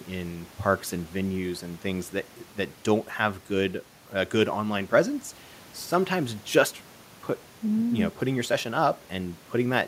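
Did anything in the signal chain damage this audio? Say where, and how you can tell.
No, nothing in the chain.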